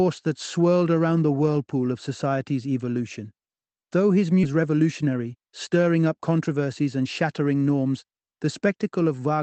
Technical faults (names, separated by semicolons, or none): skip ahead; jitter buffer speed-up